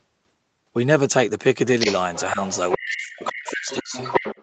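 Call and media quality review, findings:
Other side's voice leaking through: second voice audible under the talker at 1.79–1.95 s, nearly as loud as the talker, then 2.14–2.78 s and 2.95 s to the end, well below the talker. Likely cause: echo canceller residual from loudspeaker playback. Unlike room reverb, the leaked sound is a separate voice with its own timing, not a smeared tail of the talker.

Speech suppressed in double talk: talker's level dips hard, close to silence at worst, across 2.77–3.95 s, about a second affected in all, while the far side was playing on the loudspeaker. Likely cause: echo suppressor attenuating both signals during simultaneous talk. Unlike packet loss, the dips follow the other talker, with no clicks or robotic concealment. The 8 kHz band limit from the Opus path sits under all of it.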